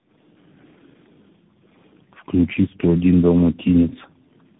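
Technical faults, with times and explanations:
Throughout: tandem speech coding. The call was decoded and re-encoded at each link border, passing through three speech codecs in a row, ending in CVSD, with each coder degrading the last one's output. The speech sounds rough, muffled and warbly, with nothing above 3.8 kHz.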